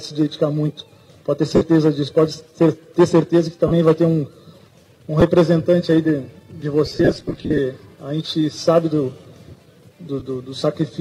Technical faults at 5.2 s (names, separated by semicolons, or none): lost LE Audio frames